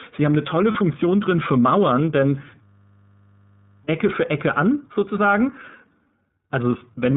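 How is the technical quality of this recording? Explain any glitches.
The technical quality is poor: the whole recording is narrowband and coloured by a low-bitrate speech codec, with a brief dropout early on and a long frozen buzz in the middle.

The iLBC codec runs throughout. Nothing above 4 kHz survives, so the speech is muffled and slightly rough and synthetic. The damage is plainly audible and even across the clip, unlike a local glitch, and fits the 13.33 kbps mode with 30 ms frames.

A lost iLBC frame at about 0.72 to 0.76 s leaves a 30 ms gap. The decoder fills it by repeating the last pitch cycle with added noise, giving a tiny held, buzzy vowel. The voice recovers almost immediately because each frame decodes independently, unlike a hang loop.

A system hang loop runs from 2.64 to 3.84 s. The machine stalled while the audio hardware kept replaying one 20 ms buffer. That produces a steady 50 Hz buzz, not a vowel-like fill, and about a second of real audio is lost.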